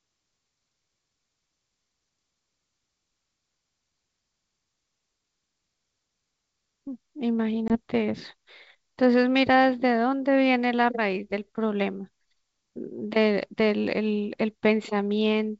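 At 7.68 s the speech drops into a hard-edged gap of about one packet's worth, 20 ms of silence, and that's packet loss on an ADPCM call. The decoder's predictor and step size lose track of the sender's, so the audio returns through 7.76 s with brief distortion before settling.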